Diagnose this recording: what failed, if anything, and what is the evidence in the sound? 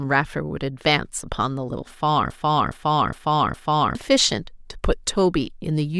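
A broken-record loop runs from 2.30 to 3.95 s. One 0.41 s fragment of the speech repeats exactly, four times back to back. The speech that belonged in that span never plays. The likely cause is a stalled playback or streaming buffer resending its last block.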